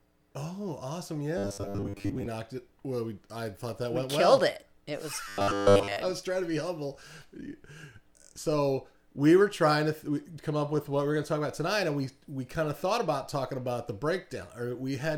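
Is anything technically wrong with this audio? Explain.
Yes. From 1.38 to 2.26 s and 5.28 to 5.97 s, robotic sound from repeated short buffers gives a rigid 100 Hz metallic buzz, likely from a roughly 10 ms buffer looped while most real audio is skipped. On a spectrogram this appears as evenly spaced harmonic lines; on the waveform, as identical repeating cycles.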